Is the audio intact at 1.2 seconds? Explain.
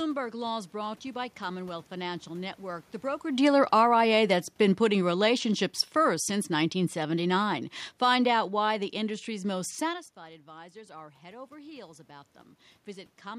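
Yes, the speech at 1.2 seconds is intact, with only the background noise of the room beneath it and no system fault at that moment.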